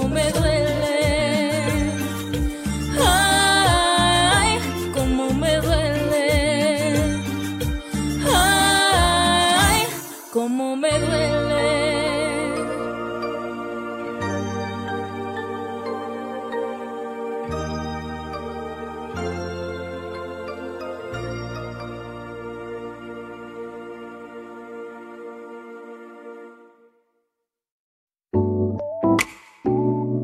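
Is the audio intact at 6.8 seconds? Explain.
Yes, at 6.8 seconds the audio is intact, with no dropout, click, distortion or other fault to be heard at that moment.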